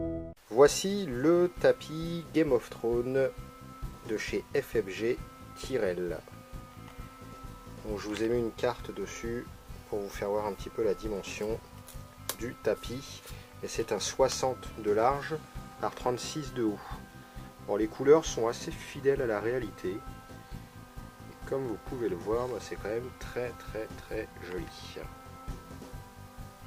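No technical faults are audible anywhere in the audio.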